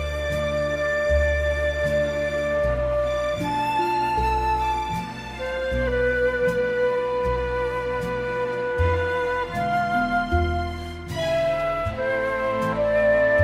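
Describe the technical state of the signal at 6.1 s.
At 6.1 s the signal is intact, with no dropout, clipping, glitch or other technical fault present at that point.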